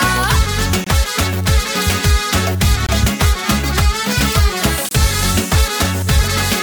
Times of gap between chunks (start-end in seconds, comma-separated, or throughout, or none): 0.84-0.86, 2.86-2.89, 4.89-4.91